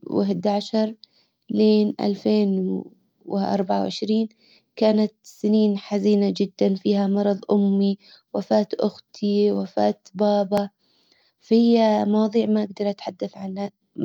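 At 4.59 s, right after "عشر لالفين واربعة وعشرين" and before "كانت سنين حزينة جدا", the speech skips forward with a tiny jump, and the same skip returns at 10.58 s after "امي وفاة اختي وفاة". This is audio missing between chunks, most likely from a recorder handling the sound in 6-second blocks and dropping roughly 15 ms at each handover. Unlike a dropout, there is no silent gap: the two sides butt together directly.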